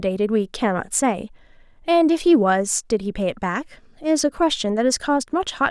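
No technical faults are audible.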